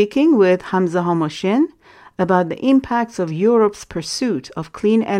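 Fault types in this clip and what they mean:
No fault types are present in this clip.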